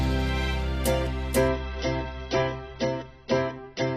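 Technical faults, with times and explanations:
1.49–3.97 s: adaptive stream at a lower bitrate. At 1.49 s the sound abruptly turns thinner, with no gap. Nothing remains above 6.1 kHz and codec artefacts rise until the end. This fits a player falling back from roughly 96 to 16 kbit/s AAC when throughput dropped.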